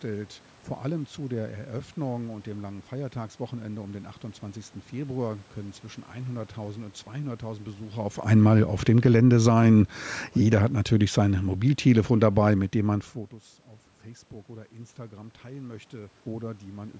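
Speech recorded through a call microphone path shows automatic gain falling twice: from 8.2 to 9.42 s the level sinks by about 5 dB, and from 10.38 to 13.09 s by about 6 dB. The room noise drops with the voice each time, which marks the control lowering its gain after judging the input too loud or its background noise too strong, just after the talker moves near 8 s. Between these, automatic gain rising from 9.34 to 10.0 s lifts voice and background together by about 4 dB as the control finds the input too quiet, before pulling back again until the talker shifts once more near 13 s.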